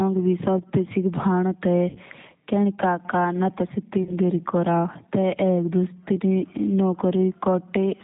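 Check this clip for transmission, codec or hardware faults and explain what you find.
Two faults are present: a low-bitrate speech codec across the whole clip, and three short dropouts covered by that codec's loss concealment.

G.729 codec, throughout: the speech is rebuilt from a vocal-tract filter, pitch predictor and sparse pulses, which fits 8 kbit/s G.729A. Nothing above 4 kHz survives, and the voice sounds plainly rough and synthetic.

VoIP packet loss concealed by the speech codec, at 1.89–1.98 s, 4.03–4.16 s and 6.94 s: the decoder extrapolates its last pitch and filter with falling gain. The speech smears into a brief buzzy tone or coloured noise that fades, consistent with roughly 50, 30 and 10 ms of lost audio.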